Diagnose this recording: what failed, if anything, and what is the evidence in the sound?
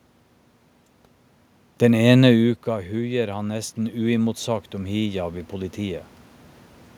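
Automatic gain rising from 2.4 to 6.08 s, in call processing. After the talker moves away around 2 s, the input falls about 12 dB. The AGC then slowly raises its gain by about 8 dB, swelling the voice and room noise together.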